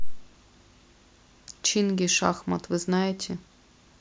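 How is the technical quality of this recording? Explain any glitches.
The technical quality of the recording is sound, with no glitches to explain.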